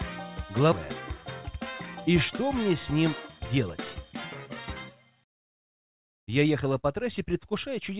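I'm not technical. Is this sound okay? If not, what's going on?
No. From 1.42 to 2.05 s there is a jitter buffer speed-up. The call receiver had built up too much waiting audio, so it snipped out tiny repeated slices, about 50 ms in total. That stretch plays about 6% faster at the same pitch and sounds rushed.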